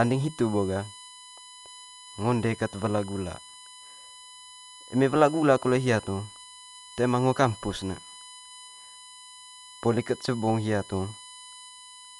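A speech recording carries two faults for its whole length. The first is USB whine. A steady tone sits at 1 kHz, with its strongest component at the third harmonic, 3 kHz. It stays roughly 20 dB below the speech. The pitch never moves. That fixed pitch points to the USB bus and its 1 ms frame rate. The current drawn on each frame leaks into the audio through power or ground. The second fault sounds like heavy lossy coding. The band stops dead at 11.5 kHz, so the speech is dull. The damage is plainly audible. A rough, fluttering noise clings to the voiced parts. The likely cause is Dolby Digital compression at a low bitrate, around 64 kbps. At that rate the encoder cuts the top of the band. It also gives many frequency lines no mantissa bits. The decoder fills those gaps with noise, and that noise is the flutter heard around the tones.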